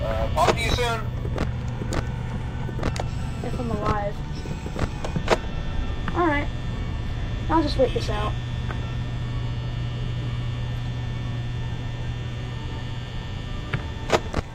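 Nothing technical goes wrong anywhere in this audio, so there's honestly nothing here to flag.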